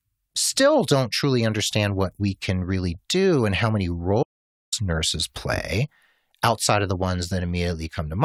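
At 4.23 s the speech cuts off abruptly and does not return until 4.72 s, leaving a gap of about 0.49 s that is dead digital silence, with no room tone or background hiss beneath it. Whatever was said in that half second is simply missing. This is an audio dropout to silence, likely caused by the input being lost briefly, through a disconnected device, failed link or accidental mute, while recording carried on writing silence.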